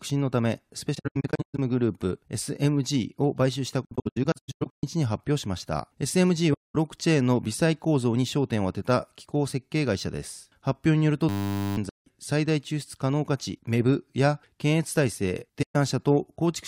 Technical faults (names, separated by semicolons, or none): AAC frame loss with muting; system hang loop